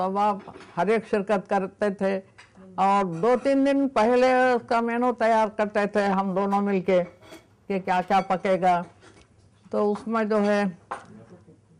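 Between 6.07 and 8.19 s the sound shows imaging from linear upsampling. The top of the band dulls. A faint metallic shimmer rides on sibilants and high notes. Mirror images appear from 11.03 to 22.05 kHz, roughly 45 dB down. This points to straight-line interpolation from about 22 kHz to 48 kHz.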